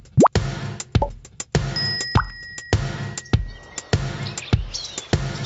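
Gain pumping runs through the whole clip. The level swells and ducks by roughly 10 dB. The likely cause is gain set far too high, with a fast limiter clamping it down.

Clock slip clicks start at about 0.13 s and run to 5.43 s. A faint tick repeats roughly every 40 ms, around 150 in all, blurring into a soft rattle. Each is a single dropped or repeated sample, likely from two unsynchronised clocks about 500 ppm apart.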